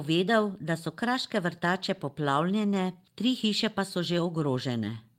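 At 2.37 to 2.39 s there's a lost packet rebuilt from error correction: about 20 ms, fitting a single packet, played from its low-bitrate backup copy, so no gap but a brief rougher, noisier patch.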